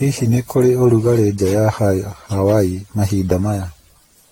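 Throughout, the speech sounds swirly, hollow and smeared, with blurred attacks and nothing above 16.6 kHz. This is likely generation loss from around seven lossy re-encodes.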